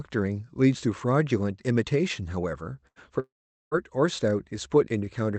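At 2.87 to 2.99 s, a burst of packet loss replaces about 80 ms of speech with a decaying held buzz or hiss.

From 3.20 to 3.74 s, a long network dropout, likely, leaves a brief fading buzz or hiss, then about 0.43 s of flat waveform and blank spectrogram.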